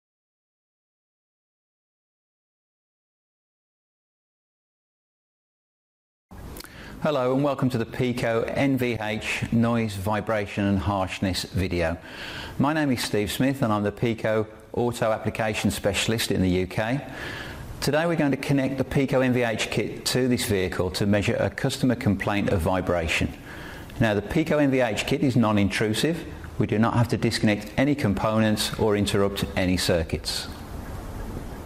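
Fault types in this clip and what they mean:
Corrupt frame decoded: Damaged bits in compressed frames reached the decoder, which played them anyway, so misread gains and codes put energy at the wrong frequencies. This happens three times, as short blips or bursts of noise: 8.96 to 9.02 s, spanning a couple of frames and peaking around -15 dBFS; 13.03 to 13.06 s, also about two frames and the loudest at roughly -10 dBFS; and a faint single-frame blip at 19.09 s, near -25 dBFS.
Channel delay (comb filtering): From 26.07 to 27.58 s one channel lags the other by about one sample, roughly 0.02 ms, and the two are summed to mono. Content shared by both channels cancels at evenly spaced frequencies. With such a tiny offset the first notch lands near the top of the audible range, around 20 kHz, so the sound loses a little air and sheen at the very top rather than turning audibly hollow.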